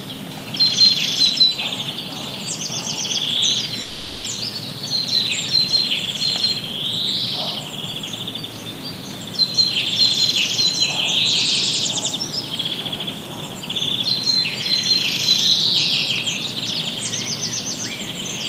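At about 3.81 s the sound stops being itself and turns into a smeared buzz that thins out and fades, lasting until about 4.28 s. When it picks back up, roughly 400 ms of material has simply gone missing, and the timing sits a few tens of milliseconds off from before. That's likely a long network dropout: the receiver papered over about 450 ms with a continuation of the last audio, never reaching full silence.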